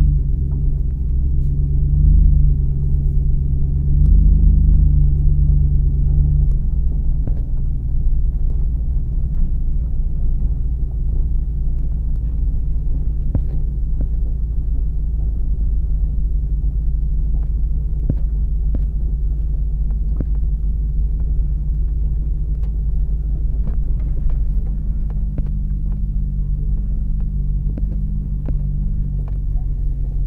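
Nothing in the audio stood out as a technical problem on listening.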